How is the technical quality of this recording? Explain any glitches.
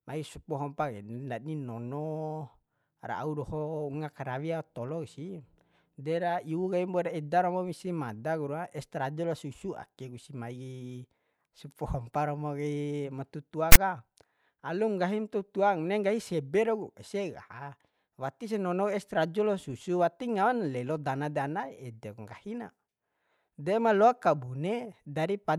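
The recording has one clear glitch. At 13.72 to 13.76 s, a loud, harsh rasp cuts in abruptly, lopsided toward one side of the waveform, with hard edges. This is file tags played as audio: a block of text metadata was decoded as samples, and its character bytes produced that brief burst.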